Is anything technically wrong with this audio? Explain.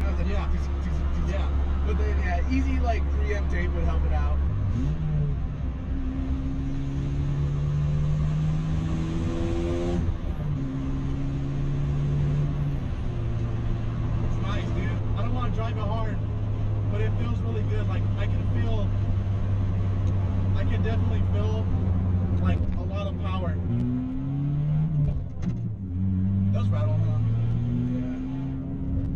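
Yes. Throughout the clip there is channel delay (comb filtering). One channel trails the other by roughly 10 ms, and summing them to mono cancels shared content at regular intervals. Notches start somewhere around 40 Hz and repeat about every 100 Hz, giving a hollow, phasey tone. On a spectrogram this appears as fixed, evenly spaced dark horizontal bands.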